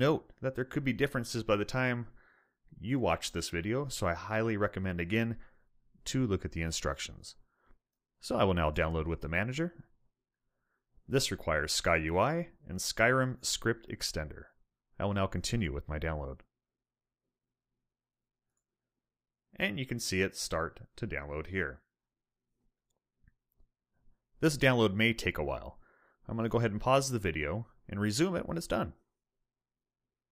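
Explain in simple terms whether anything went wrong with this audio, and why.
At about 8.83 s there is a single sharp click, over almost instantly, with nothing else audibly missing. This is most likely dropped samples: a handful of the tiny values that make up the digital sound, only about a tenth of a millisecond's worth, went missing. The sound wave jumps straight from one point to a later one, and that sudden step is what your ear hears as the click.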